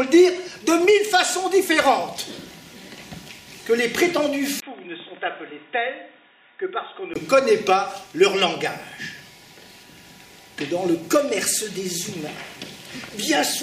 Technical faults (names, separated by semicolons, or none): input switched to a poorer device